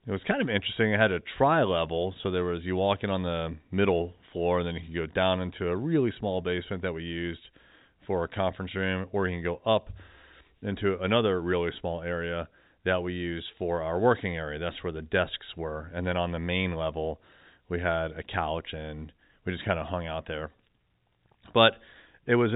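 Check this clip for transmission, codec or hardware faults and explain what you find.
Nothing stood out on listening to this speech. It carries the narrow telephone band of G.711 coding, with no sound above about 3.8 kHz, as expected for that path.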